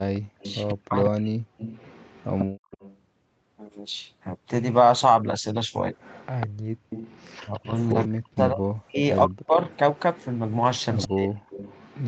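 An echo canceller that failed to remove the far end's loudspeaker sound, the likely cause of the echo leak, lets a delayed copy of the speech return about 145 ms late and about 15 dB down. It appears from 0.14 to 0.72 s, 1.58 to 2.97 s, 6.0 to 8.08 s and 9.65 to 12.08 s as a faint trailing double.

Overlapping with the first stretch, from 0.15 to 1.37 s, both sides talk at once. The canceller likely cannot separate the local talker from the echo, so it turns both down. This is speech suppressed in double talk: the voice sinks by around 40 dB in pieces.

From 2.46 to 2.69 s the background is gated by the echo canceller. The canceller clamps the microphone while the loudspeaker plays, so the room sound drops by about 36 dB for roughly a fifth of a second and then returns.

The same double-talk suppression recurs from 7.42 to 9.6 s and briefly from 11.07 to 11.39 s. Speech dips and chops out in pieces where it overlaps the other side, likely because the canceller again mistakes the local talker for echo.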